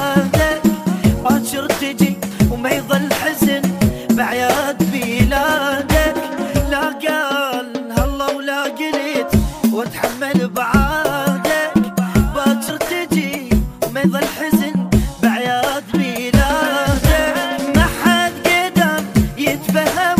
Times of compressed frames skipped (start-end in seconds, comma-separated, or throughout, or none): 1.24, 3.88, 6.10, 8.64, 12.69